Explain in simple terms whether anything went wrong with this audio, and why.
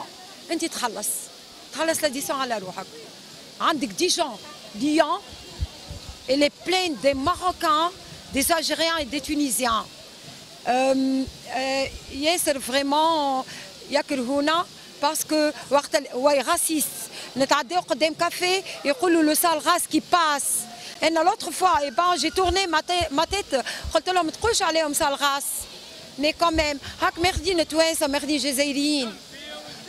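At 20.94 s the sound briefly vanishes, leaving a tiny tick. This is a block of digital silence: for about 12 milliseconds the audio was swapped for pure zeros, probably because the program didn't hand over the next chunk in time. The length fits a 512-sample buffer. Unlike a fade-out or a quiet dip, the sound stops dead and restarts instantly, so the gap is heard as one sharp tick.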